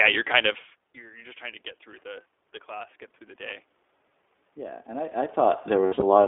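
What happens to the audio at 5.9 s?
Just after "I I", from 5.86 to 6.03 s, there are lost iLBC frames. About 120 ms of audio goes missing, scattered over 160 ms, which fits six dropped 20 ms frames, with the longest gap roughly 70 ms. For each gap the decoder repeats the last pitch cycle mixed with noise, so the audio turns into a held, buzzy or breathy vowel. Because iLBC frames decode independently, the voice returns cleanly as soon as packets arrive again.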